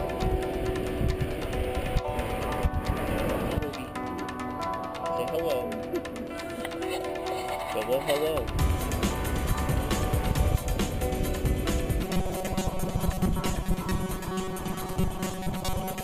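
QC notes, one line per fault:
12.04–16.04 s, robotic sound from repeated short buffers: a rigid metallic buzz near 188 Hz, likely from about half the audio being replaced by repeats of the last 5.3 ms.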